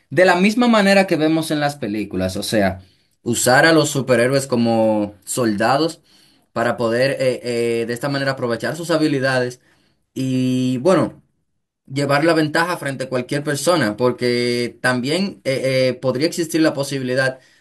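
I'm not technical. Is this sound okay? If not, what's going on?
Yes, it's fine: nothing in this recording sounds wrong, so there's nothing here you need to worry about.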